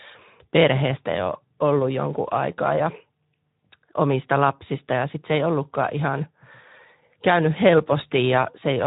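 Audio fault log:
Throughout, Speex codec: the speech sounds noisy and hoarse with a grainy edge, and nothing is heard above about 3.8 kHz. At a rate that fits roughly 11 kbps, this CELP coder has too few bits to model the excitation cleanly, so the voice is roughened and narrowband.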